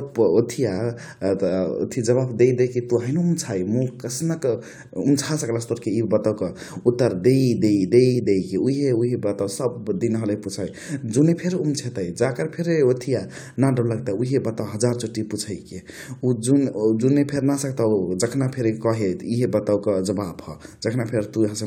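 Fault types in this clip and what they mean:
No faults detected; signal path and playback show no audible defects.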